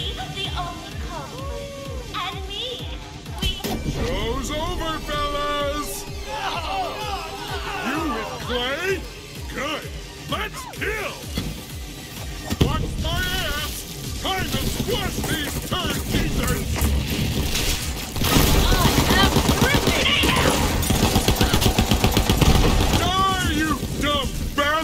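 At 21.57 to 21.63 s there is a short concealed packet loss: about 40 ms of the stream arrived too late or not at all, and the receiver covered roughly 33 ms of the gap by extending the preceding sound before crossfading back into the real signal. It is heard as a brief smear or wobble. On a spectrogram, the harmonics or noise band run flat and slightly blurred for those few hundredths of a second. The waveform shows the preceding sound carried on, with a soft join.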